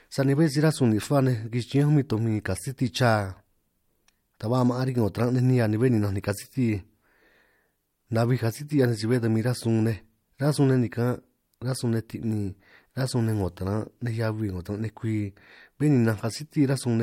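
No technical faults occur anywhere in the speech, so there is nothing to describe in time order.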